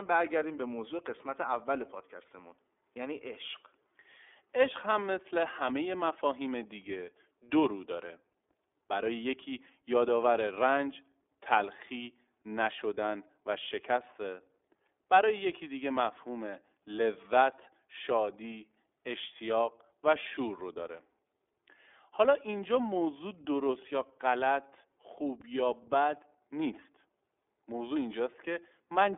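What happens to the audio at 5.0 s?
At 5.0 s, as throughout, the iLBC codec codes each short frame independently, leaving the speech rough and synthetic. A spectrogram shows nothing above 3.7 kHz.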